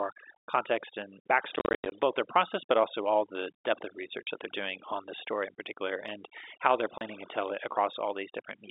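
From the start and throughout, overdone noise removal leaves the background at near silence flecked with twinkling specks. The suppressor cuts individual frequency bands whenever they approach its noise estimate, so quieter speech detail goes too within the narrow telephone band.

Packet loss filled with silence chops the speech from 1.56 to 1.92 s, with about 230 ms of holes scattered across 360 ms, the longest run 90 ms. Shorter dropouts follow at 4.25 to 4.27 s and 6.98 to 7.01 s. Each gap has hard edges, and their lengths fit 10 ms packets.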